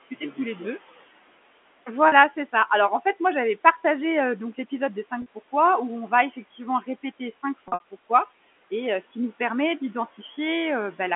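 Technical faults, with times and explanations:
2.08 s, 5.22 s and 7.68 to 7.83 s, packet loss with pitch repetition: held, buzzy sound. The first two are 40 ms gaps, which fits two 20 ms packets, bridged by repeating the last pitch period. The third loses 120 ms scattered over 160 ms, and its 60 ms run outlasts the roughly 50 ms fade, sinking toward silence before a short cross-fade back.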